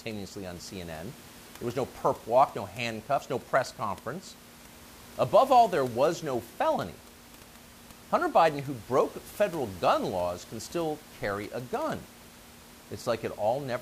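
Nothing in the speech stood out as a technical fault on listening, with only a faint room noise sitting about 22 dB below the voice.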